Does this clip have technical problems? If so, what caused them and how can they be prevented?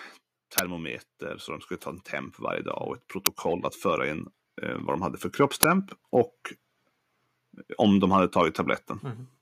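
Yes. Uninitialised buffer bursts hit at 0.58, 3.26 and 5.63 s. Leftover memory played as loud digital noise, about 12 ms then 6 ms, fitting 512- and 256-sample buffers. Prevent it by zero-filling every buffer before playback.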